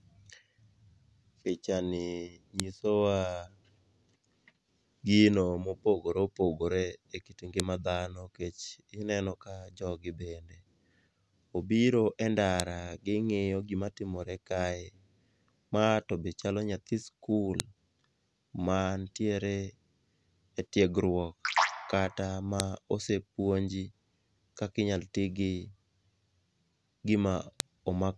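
Sharp clicks land at 2.6, 7.6, 12.6, 17.6, 22.6 and 27.6 s, one every 5 s regardless of what the speech is doing. That's a file header played as audio: each 5-second piece kept its WAV header, and those bytes get played as a brief loud snap.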